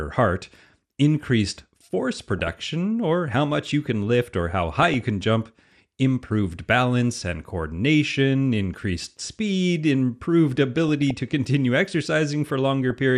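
Starved of bits throughout, the encoder has likely squeezed this speech through MP2 compression at a rate around 80 kbps. It switches off upper sub-bands and quantises the rest coarsely, so the whole recording sounds dull and granular, with a gurgling edge that is plainly audible from start to finish.

On top of that, reception errors slip past error correction into the MP2 stream, giving bursts of DAB burbling where corrupted samples put short blips of noise into single sub-bands and corrupted scale factors make sub-bands leap in level for up to a frame. The first runs from 2.13 to 2.67 s, after "heart increased" and before "or how much you", a burst that suggests a couple of dozen damaged frames. The second, 4.60 to 5.01 s, falls between "you can lift or" and "can jump improved balance", lighter in error rate. The third, 10.77 to 11.11 s, follows "coordination increased speed improved" and precedes "to continue". 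A final short burst appears at 12.90 to 12.93 s.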